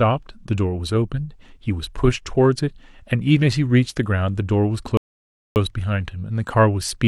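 At 4.97 s a rebuffering stall cuts the speech to silence until 5.56 s. The player ran dry of downloaded audio. Speech then resumes exactly where it stopped, adding about 0.59 s.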